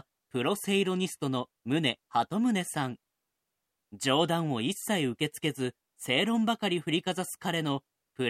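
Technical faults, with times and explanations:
No technical faults, with times or explanations, are present.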